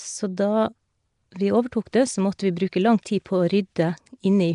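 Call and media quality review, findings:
Speech, throughout. Rough hissy halo, smeared underwater tone, plainly audible. Nothing above 10.6 kHz. Likely Nellymoser compression, Flash's old microphone codec. Fixed low bit budget per 256-sample block. Weak bands starved of bits, refilled with noise. Hence the hiss and smear. Density of damage fits a rate near 44 kbps.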